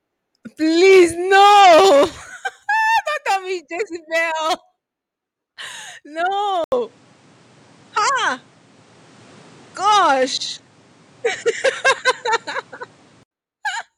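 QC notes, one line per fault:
6.64–13.31 s, input switched to a poorer device: after an 80 ms silence the speech turns duller, with nothing above 10.5 kHz, shifts level by a few dB and gains new background noise about 40 dB down, likely from recording moving to a narrower-band microphone.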